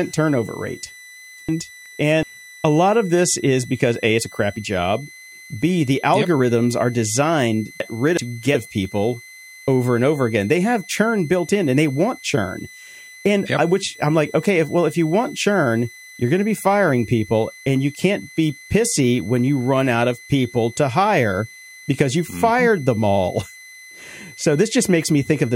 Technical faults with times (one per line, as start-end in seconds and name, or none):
0.00-25.56 switching supply whistle
1.49-2.23 chunks out of order
7.80-8.54 chunks out of order